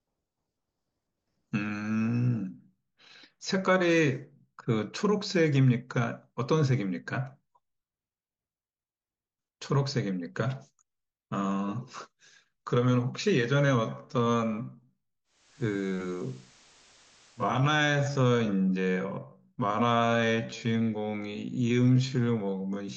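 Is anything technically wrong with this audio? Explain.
Yes, there are two faults.

From 13.7 s to the end, the speech suddenly slows to about 0.61 times its pace while the pitch holds, so it drags. This time-stretched section was likely made by repeating short pieces of audio. On a spectrogram, the harmonics stay at the same height while the syllables spread wider.

From 15.24 s to 17.69 s, a digital radio blending to analogue cross-fades over about 405 ms to the FM broadcast and later back. A hiss floor appears roughly 30 dB below the signal, and the level shifts by about 2 dB. A spectrogram shows a broadband noise haze between the blends.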